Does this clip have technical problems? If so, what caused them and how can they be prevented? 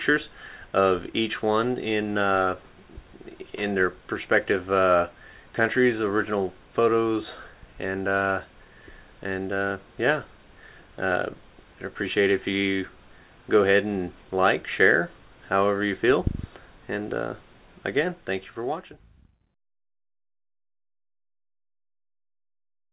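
No, there are no faults.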